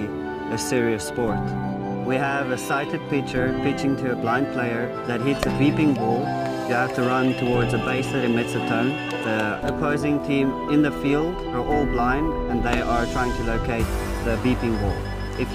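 Nothing goes wrong anywhere in this clip, so there's no fault to walk through in time order.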